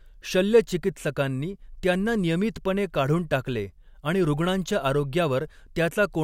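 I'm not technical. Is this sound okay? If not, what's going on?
Yes, no faults heard.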